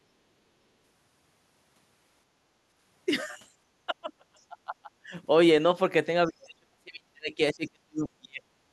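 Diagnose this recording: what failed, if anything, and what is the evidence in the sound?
Speech suppressed in double talk, 3.86 to 5.13 s and 6.27 to 8.57 s, at the call-processing stage. The speech dips, falling by about 35 and 40 dB at worst, through most of the second stretch. Likely cause: an echo canceller that couldn't separate the talker from loudspeaker echo and turned both down.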